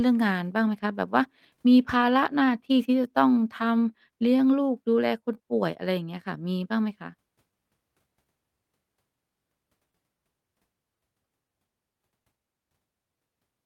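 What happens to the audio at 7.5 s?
At 7.5 s the speech sits inside a stretch of repeated timing corrections running from 0.33 s to 13.17 s. The receiver keeps repeating short slivers of audio to stay in step, so playback runs at about 98% speed and gains roughly a fifth of a second overall. Each edit is tiny, heard, if at all, as a faint hiccup or slightly unsteady pace. Unlike packet-loss concealment, the edits all lengthen the audio.

The cause is clock drift between sender and receiver across the whole clip. The sender's clock runs about 2% slow, so the jitter buffer keeps draining and the receiver must pad with repeated pieces, and the buffer may briefly run empty. Unlike network jitter, which produces random bursts, this drift gives a steady one-way pull on the timing, so the small stumbles recur at uneven intervals throughout rather than clustering around one moment.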